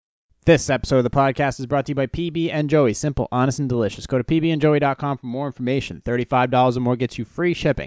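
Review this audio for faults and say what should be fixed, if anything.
Nothing needs fixing here: I listened all the way through this speech clip and didn't hear a single fault, so it can stay just as it is.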